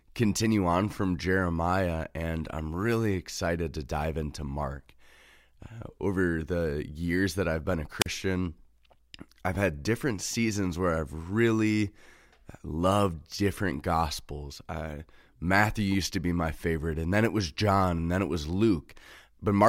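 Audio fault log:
7.99–8.07 s, wireless microphone squelch dropout. Right after "that I've been a", a brief rise of hiss is followed by a 40 ms hole of near silence before the speech returns. The radio link faded, so the receiver's squelch muted its output.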